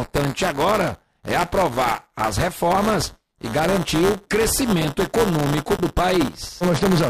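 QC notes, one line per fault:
Throughout, buffer tearing: the software filling the ring buffer and the hardware reading it out have drifted out of step with each other, so their positions cross inside every period. In each cycle a small slice of the buffer still holds audio from about ten milliseconds earlier, with hard joins on either side. The repeating splice produces a steady robotic buzz at 172 Hz, which fits a 256-sample buffer, and it is present only while there is signal.
5.76–5.79 s, digital broadcast dropout: the receiver lost valid data for a moment, consistent with a single frame failing to decode, and muted until good frames resumed. The sound drops out abruptly for about 30 ms and then continues, and roughly 24 ms of the programme sent during the gap is missing rather than delayed. The result is a brief hole in the audio, not a stretch of noise.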